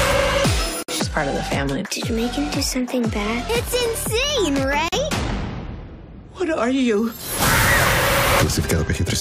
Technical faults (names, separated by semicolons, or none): gap at a join of encoded pieces